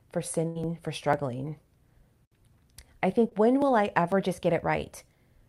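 A regular tick or small pop starts at 0.14 s and repeats every 0.50 s to the end of the clip, heard only while speech is present. These are periodic USB or driver dropouts: at each stall a sliver of audio is skipped outright, leaving a tiny discontinuity.

From 0.47 to 0.57 s the speech holds and fades instead of moving on, then jumps ahead. This is a burst of packet loss: about 80 ms of audio never arrived, and the receiver spent 79 ms stretching and fading the last sound before resuming past the missing stretch.

At 3.29 to 3.33 s there is a brief smear. This is short concealed packet loss: roughly 20 ms failed to reach the decoder in time, so the receiver continued the preceding sound for 18 ms and blended back into the real audio.

From 4.21 to 5.37 s the speech runs faster and sits higher, about 90 cents (nearly a semitone) sharp with a 5.35% speed increase, then snaps back. This is likely a drift correction step, where clock-matching software abruptly changed the playback rate to rebalance its buffer.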